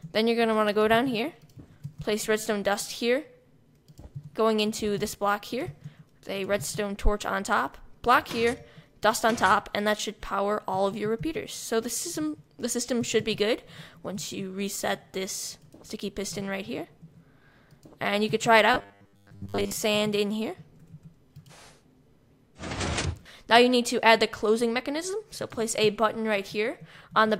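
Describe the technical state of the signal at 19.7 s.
At 19.7 s the sound has a rigid, metallic 100 Hz buzz, robotic sound from repeated short buffers (18.74–19.76 s), likely from a 10 ms block being repeated whenever fresh audio arrives too late. Most of the span is repeated material, and the waveform shows identical 10 ms cycles while the spectrogram shows evenly spaced harmonics at multiples of 100 Hz.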